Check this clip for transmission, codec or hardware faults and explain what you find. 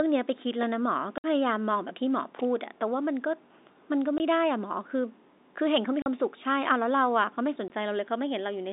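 The speech has four short gaps from packet loss filled with silence, at 1.18 to 1.24 s (60 ms), 4.18 to 4.20 s, 6.02 to 6.06 s (40 ms) and 7.68 to 7.70 s. Each hole is dead silence with hard edges, and every length is a multiple of 20 ms, which points to 20 ms packets being dropped and nothing played in their place. That fixed step and the plain silence set it apart from a loose connector, which cuts out for irregular lengths, and from concealment, which would smear or repeat sound across the gap. The narrow telephone band of the G.711 coding, roughly 250 Hz to 3.7 kHz, is normal for that coding.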